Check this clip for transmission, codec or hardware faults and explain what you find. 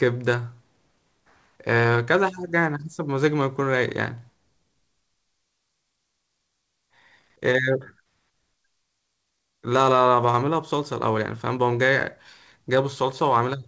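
No transmission, codec or hardware faults turn up in this speech clip, which carries the normal band limit of a G.722 call path with nothing above 8 kHz.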